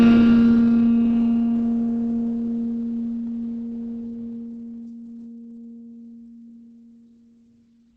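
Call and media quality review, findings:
Music, whole clip: muffled, hoarse tone with plainly audible damage. The sound points to Opus compression at a rate near 16 kbps, likely in its SILK speech mode with wideband bandwidth.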